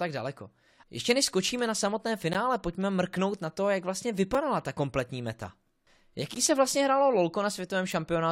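A speech clip broken by three short hard-edged silences at 2.33, 4.35 and 6.35 s, lasting about 14, 4 and 12 ms. They fall exactly 2.0 s apart, the mark of a gap between stream segments: each segment's timestamps leave a little space before the next, and the player fills it with silence. Unlike a dropout or lost packet, nothing is missing. The sound resumes exactly where it stopped, only slightly delayed.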